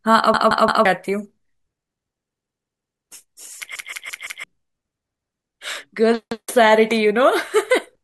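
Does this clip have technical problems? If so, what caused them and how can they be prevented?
Yes. Repeated buffer at 0.34–0.85, 2.39–3.07, 3.76–4.44, 5.12–5.29 and 6.32–6.49 s: new audio arrived late, so one 171 ms chunk, fitting an 8192-sample buffer, replays one to four extra times as a hard-edged stutter. Deeper buffering or higher audio-thread priority prevents it.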